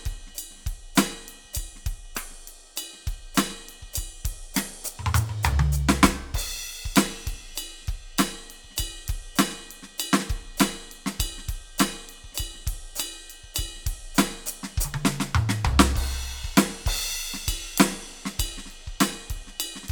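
No technical faults occur at any point in this music.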